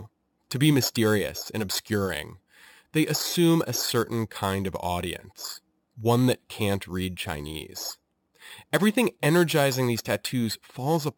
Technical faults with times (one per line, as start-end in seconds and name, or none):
0.00-11.17 imaging from sample-and-hold upsampling